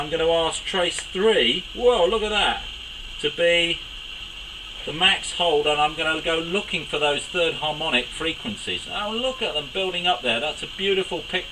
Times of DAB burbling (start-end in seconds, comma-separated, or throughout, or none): none